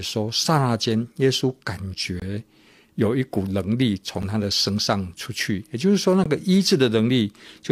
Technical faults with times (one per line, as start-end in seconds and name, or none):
2.20-2.22 gap between stream segments
4.22 gap between stream segments
6.24-6.26 gap between stream segments